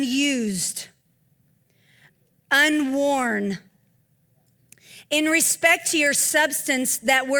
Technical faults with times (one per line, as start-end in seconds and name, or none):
0.00-7.40 clock drift between sender and receiver
0.09-4.76 repeated timing corrections